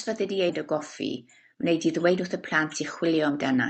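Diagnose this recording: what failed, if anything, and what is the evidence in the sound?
Jitter buffer speed-up in the call's receive buffer: the speech hurries from 1.14 to 2.22 s at 116% speed and from 2.64 to 3.58 s at 107%. Whole pitch periods were cut to drain an overfull buffer, so pitch stays steady, unlike a clock or resampling error.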